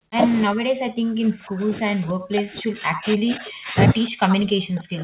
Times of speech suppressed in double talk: 0.00-0.18, 0.46-3.75, 4.10-5.03

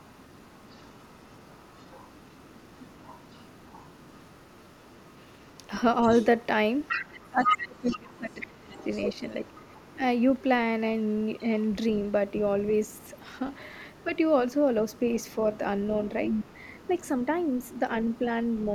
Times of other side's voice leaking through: 0.00-10.42, 11.20-12.12, 12.67-18.64

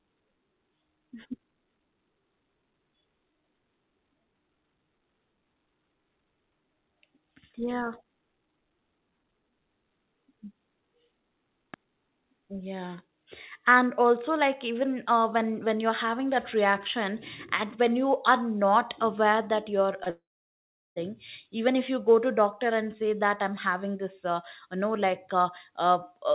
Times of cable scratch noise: none

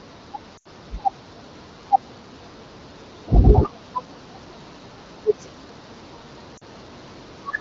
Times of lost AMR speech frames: 0.57-0.67, 6.57-6.64

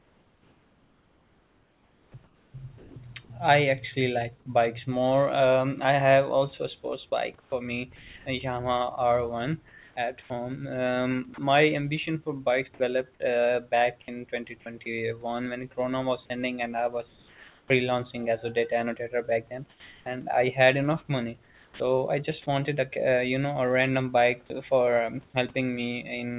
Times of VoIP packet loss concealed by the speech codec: none

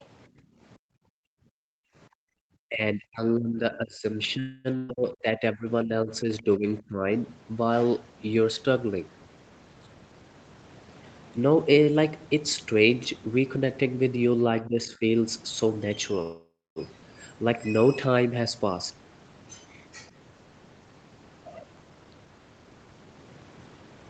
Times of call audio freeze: 4.39-4.67, 16.22-16.79

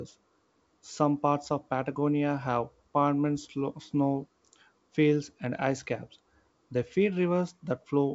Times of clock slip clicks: none

